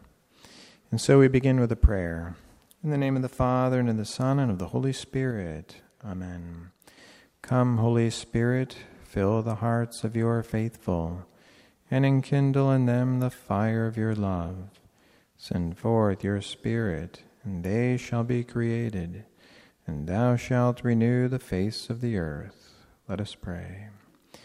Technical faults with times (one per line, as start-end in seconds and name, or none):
5.31-6.98 sudden gain jump